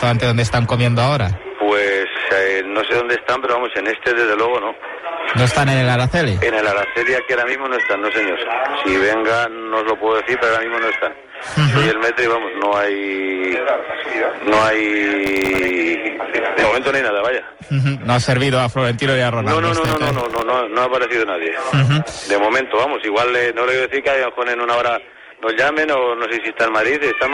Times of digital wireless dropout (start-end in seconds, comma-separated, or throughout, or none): none